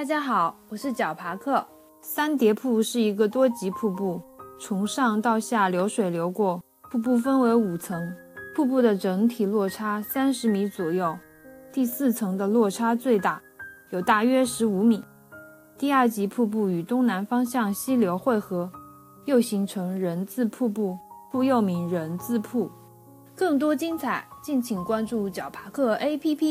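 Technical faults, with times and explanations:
Throughout, low bit depth with noise shaping: the steady, thin hiss, which fits about 10 bits, sits about 35 dB below the signal and rises steeply toward the top of the band. The rounding error is pushed upward rather than spread flat like ordinary broadband hiss.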